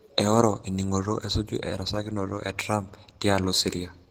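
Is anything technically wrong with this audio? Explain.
Yes. Opus voice compression damage is plainly audible throughout the speech. The coder appears to split the band, with linear-prediction coding below 8 kHz and a thin transform layer above, at a rate consistent with about 16 kbps. Coarse excitation coding leaves the speech hoarse and slightly robotic.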